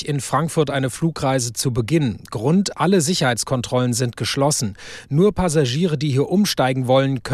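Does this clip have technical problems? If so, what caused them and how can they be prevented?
No, this clip has no technical problems, so there is no cause to identify and nothing to prevent.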